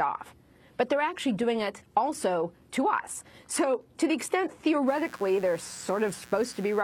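Mains buzz enters at 4.85 s and continues to the end at 6.84 s. Switching spikes at twice the 60 Hz mains rate leak into the signal path, and their dense harmonics form a steady, raspy buzz sitting roughly 25 dB below the sound.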